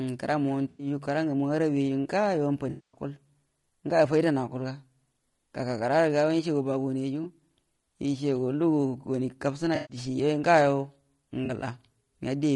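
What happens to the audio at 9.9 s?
AAC frame loss with concealment runs from 9.75 to 9.97 s. The decoder lost its incoming frames and patched the gap by reusing the last good spectrum, so the speech there turns smeared and noisy, with a phasey, blurred quality instead of a clean cut.

Throughout the clip, the speech is rough and grainy, with noise between the harmonics and a thin, synthetic top band. This is likely low-delay AAC compression (AAC-ELD) at a low bitrate, around 32 kbps. Its short frames resolve pitch harmonics poorly.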